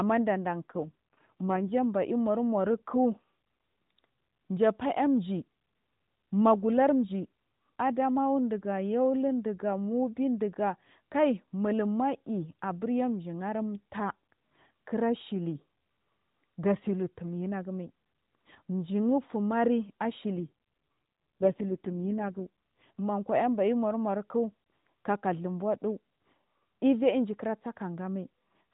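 From 0.62 to 1.72 s and again from 20.35 to 23.00 s, an AMR rate drop makes the speech rougher and buzzier, consistent with a step from 12.2 to 4.75 kbps. The spectrogram keeps its 4 kHz ceiling and shows no gap, but the harmonics smear into coarse, blotchy energy.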